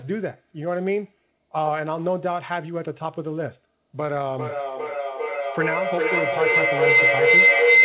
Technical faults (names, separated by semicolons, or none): feedback howl